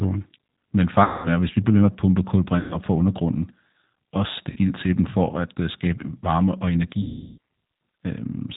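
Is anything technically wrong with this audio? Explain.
Yes. G.729 codec damage runs through the whole speech clip and is plainly audible. The sound is rebuilt at 8 kbit/s from a vocal-tract filter, a pitch predictor and a few pulses per 5 ms subframe, with the G.729A variant likely in use. Nothing above 4 kHz survives, so sibilants go dull and the voice takes on a rough, slightly synthetic edge. Any background noise warbles.

VoIP packet loss concealed by the speech codec occurs four times: 1.04 to 1.29 s, ending just before "er at hvis vi"; 2.59 to 2.77 s, between "ved med at pumpe" and "fra undergrunden"; 4.50 to 4.58 s; and 7.02 to 7.38 s, right after "øh skabe varme og". The gaps last 200, 120, 60 and 360 ms. Over each gap the decoder keeps repeating its last pitch and filter while lowering the gain, so the sound smears into a fading buzz or tinted hiss. Each frame builds on the one before, so the voice stays thin briefly after packets resume.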